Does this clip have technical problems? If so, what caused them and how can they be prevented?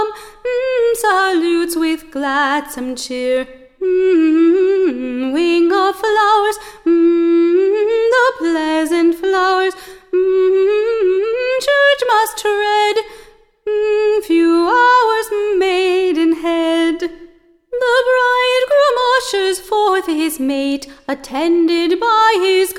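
No, nothing in the signal path shows up as a fault here, so there is nothing to trace to a cause or guard against.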